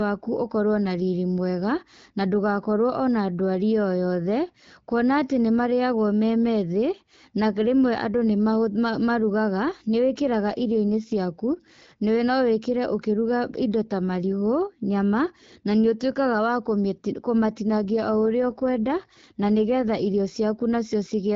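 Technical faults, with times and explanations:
10.12 to 11.14 s and 17.70 to 20.39 s, AMR rate drop: in both stretches the speech turns rougher, grainier and more synthetic, with the same bandwidth and no gap, then clears again. This fits the wideband codec being stepped down from 12.65 to 8.85 kbit/s, as happens when a weak radio link needs more of its bits for error protection. With fewer bits, the codec models the vocal tract and excitation pulses more coarsely, which makes the speech sound raspier.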